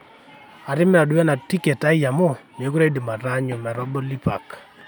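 No technical faults are audible.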